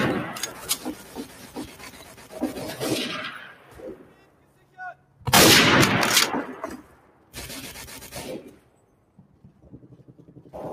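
A noise suppressor applied to music or sounds runs throughout the clip. A processor tuned for speech treats sustained, steady material as noise, so the level keeps being pulled down and released, with a swing of around 15 dB. Onsets mostly pass at full strength while held material and decays sink, giving the audio a pumping, thinned-out quality. Sound cut by the noise suppressor shows up at 0.97–1.82 s, 1.98–2.32 s, 3.53–3.75 s, 3.97–4.78 s, 4.95–5.22 s, 6.83–7.34 s, 8.55–9.66 s and 9.83–10.23 s. In each stretch the suppressor misjudges what it hears as noise and attenuates it more than its surroundings, by about 5 dB in the first and about 6 dB in the rest. Sustained and fading parts dip or have their tails clipped short, and the longest stretch runs from 8.55 to 9.66 s.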